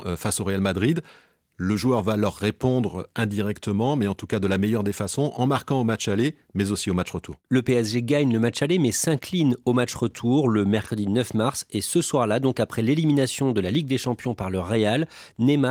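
Nothing is technically wrong with this speech clip, which comes through Opus voice compression at 24 kbps.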